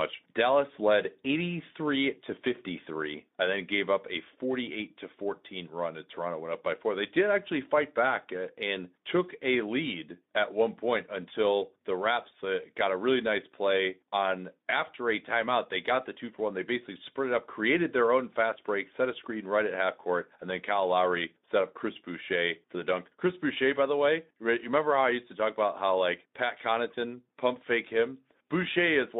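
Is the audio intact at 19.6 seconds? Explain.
Yes, at 19.6 seconds the speech is intact, with no fault at that moment.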